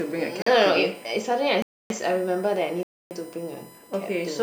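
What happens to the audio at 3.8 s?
At 3.8 s a USB whine continues, as it does throughout: 1 ms bus frames leak through power or ground, giving a fixed 1 kHz-series tone, strongest at 9 kHz, unlike low mains hum.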